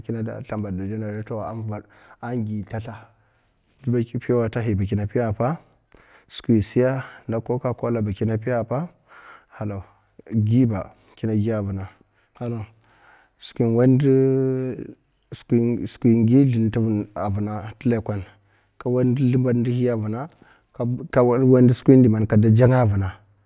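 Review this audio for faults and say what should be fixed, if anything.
No faults found; nothing needs fixing.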